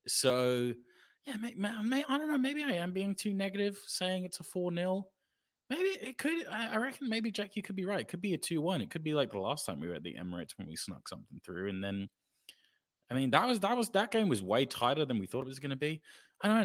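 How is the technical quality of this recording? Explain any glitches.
The technical quality of this recording is sound, with no glitches to explain.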